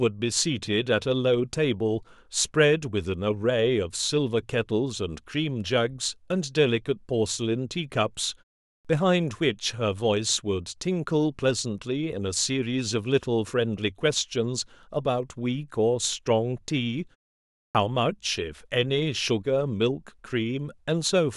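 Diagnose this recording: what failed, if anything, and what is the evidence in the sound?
The fault is a clipped start after a pause, at the playback stage. The output device sleeps through the silence and is slow to wake. Speech resumes at 8.79 s after a 0.44 s gap and at 17.69 s after a 0.62 s gap. Each time, the first 57 ms or so is missing, up to 8.85 s and 17.75 s. The onset jumps straight out of silence with its first sounds gone.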